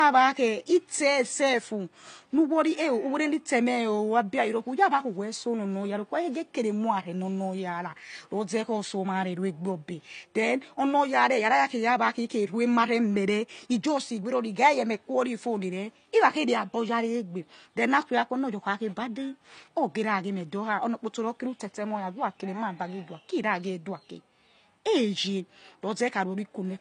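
Throughout the speech, nothing sits above 9.6 kHz, a flat ceiling on the spectrogram, so it sounds dull: likely low-bitrate audio saved at a high bitrate.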